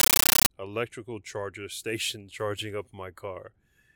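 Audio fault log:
0.0–0.5 s, compressed stream played as audio: undecoded AC-3 data heard as loud chattering static; waveform shows 13.3 ms broadband bursts at 31.25 Hz with zero-padding gaps, before "electrical charger".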